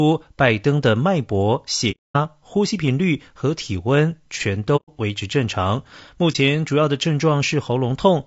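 Throughout the clip the speech sounds rough and grainy, with noise filling the gaps between harmonics and a thin, synthetic-sounding top band. This is likely low-delay AAC compression (AAC-ELD), whose short frames resolve pitch poorly, and the damage fits a low bitrate around 32 kbps.

AAC frame loss with muting produces two soft-edged holes, at 1.91–2.16 s (about 240 ms) and 4.76–4.89 s (about 120 ms), and a brief dip at 6.32–6.36 s (about 30 ms). The decoder zeroed the missing frames, and the overlapping windows fade the sound out and back in.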